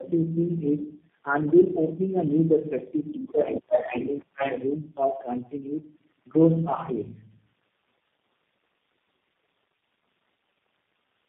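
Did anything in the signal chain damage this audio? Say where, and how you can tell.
Yes. Tandem speech coding runs through the whole clip, at the codec stage. The speech has a rough, muffled, warbling quality, and nothing above 3.4 kHz survives. That degradation points to about four low-rate speech coders in series, with plain G.711 links between them. The character fits AMR-NB and a final G.729A. Each decode-and-recode pass re-quantises the previous coder's errors, so the distortion builds up beyond what any single link would produce.

The other side's voice leaking through appears from 3.24 to 4.72 s, a problem at the call-processing stage. A second voice enters at roughly the same level as the talker, so it competes directly rather than sitting faintly underneath. The likely cause is an echo canceller leaving far-end loudspeaker sound in the microphone signal. Its residual then gets coded and sent back as if it were near-end speech.

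Speech suppressed in double talk hits from 4.26 to 4.41 s, inside that leakage stretch and also within call processing. The talker's level drops sharply for about 150 ms, falling roughly 25 dB at its deepest, then recovers. This most likely happened because both sides were active together. The echo canceller couldn't tell the talker from the loudspeaker echo, so its suppressor attenuated everything during the overlap.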